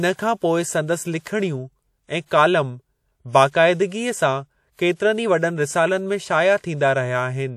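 A transform codec spread its quantisation noise across whole blocks, so noise meant for sharp speech onsets leaked into the quiet just before them. The result is pre-echo: a short hiss smearing each attack, about 52 ms from 2.26 to 2.31 s and about 55 ms from 3.48 to 3.54 s.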